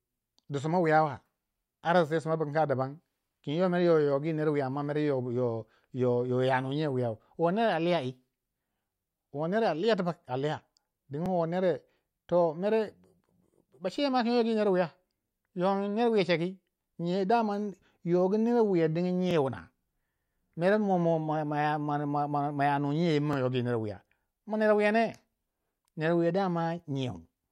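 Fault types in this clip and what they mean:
Overlapping chunks: each 4-second block starts 25 ms before the last ends. That sliver plays twice, giving a short stutter every four seconds.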